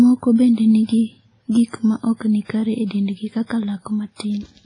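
Across the whole speech clip the sound is washy and ringing, with a hiss that swells and fades with the level and nothing above about 10.1 kHz. This is likely heavy WMA compression, an older transform codec at a low bitrate, around 24 kbps. A spectrogram would show a hard ceiling near 10.1 kHz, gaps where weak components were zeroed, and smeared noise between harmonics.

Pre-echo follows, where noise sized for a loud attack leaks into the quiet moment before it. The first comes at 2.45 to 2.49 s, after "gik ma ok ni" and before "kare e dendgi", spreading about 47 ms. The others are at 2.86 to 2.91 s after "ok ni kare e" (49 ms), at 3.46 to 3.50 s after "ni kare e dendgi" (38 ms), and at 4.15 to 4.20 s (53 ms). Each attack is preceded by a brief hiss and sounds blunted. A spectrogram shows faint broadband smudges just ahead of each onset, and the waveform shows low-level fuzz before the sharp rise.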